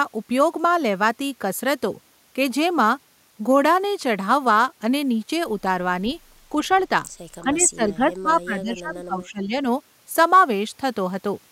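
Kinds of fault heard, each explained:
Echo leak: at 6.73 to 6.79 s and again at 7.60 to 7.64 s, brief scraps of the speech return about 345 ms late, very faint, roughly 35 dB and then 30 dB below the speech. The likely cause is a loudspeaker on the far end whose echo canceller let part of its microphone pickup through and back.
Speech suppressed in double talk: from 7.43 to 9.65 s, about two seconds of the speech dips in pieces, falling by as much as roughly 20 dB. Both sides likely talked at once, and an echo canceller, unable to separate its own talker from loudspeaker echo, turned both down.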